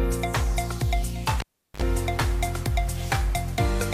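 At 1.40 s a cable is pulled and plugged in again: a pop, about 0.37 s of near silence as the signal drops away, then a 54 ms burst of 50 Hz mains buzz while only the tip connects, and another pop at 1.82 s. The waveform shows spikes bracketing a flat gap; the spectrogram shows broadband clicks and stacked 50 Hz harmonics.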